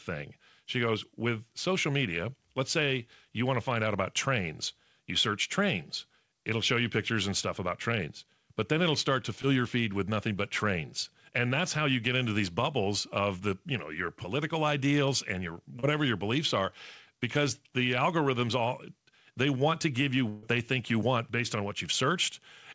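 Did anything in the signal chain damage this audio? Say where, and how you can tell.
Yes, on the network stage of the call. Packets went missing twice and the decoder concealed them, at 9.42 to 9.45 s (after "then it'll start to") and 15.79 to 15.85 s (before "your beliefs are because"). This is short concealed packet loss: the decoder extended the preceding sound for about 15 and 33 ms. Each gap shows up as a brief smear or wobble.

The same wideband call path, cut off above 8 kHz, also suffered a burst of packet loss from 20.29 to 20.45 s, between "want to give you" and "they think you want". About 140 ms never arrived. Concealment stretched the last sound into a fading buzz or hiss, so the audio skips ahead with that stretch lost.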